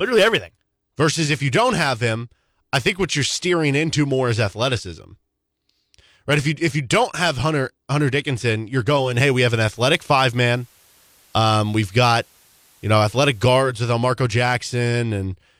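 At 8.97 s the receiver cross-fades over 241 ms from digital to FM: digital radio blending to analogue. Faint hiss sits well below the speech, and the level shifts by about 2 dB until it blends back at 13.80 s.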